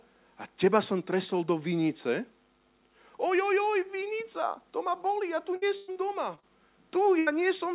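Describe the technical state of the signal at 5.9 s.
A burst of packet loss runs from 5.76 to 5.90 s. About 120 ms of audio never arrived, so the receiver stretched the last sound and let it fade into a held buzz or hiss, with no silence. The sound then resumes further along, and the skipped stretch is gone.

Right after it, from 5.92 to 5.98 s, a short concealed packet loss covers about 40 ms. It is repaired from the preceding sound and blended back in, so it is heard as a brief smear or wobble rather than a drawn-out fading tone.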